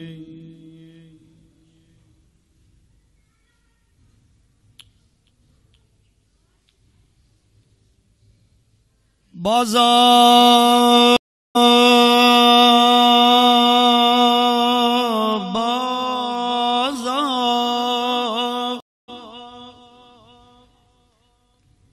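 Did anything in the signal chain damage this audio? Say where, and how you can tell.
Yes, two network stream reconnects, each a dropout followed by a fresh decoder starting mid-stream: 384 ms silent at 11.17 s, then replaying 320 ms; 277 ms at 18.80 s, then jumping roughly 0.3 s ahead.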